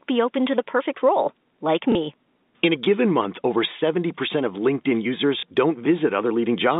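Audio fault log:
1.92–1.95 s and 5.40–5.43 s, packet loss with last packet repeated: each time, about 30 ms of audio went missing, which fits one lost packet, and the receiver replayed the previous packet. The repeat ignores the pitch cycle, making a small blip in the narrowband telephone sound.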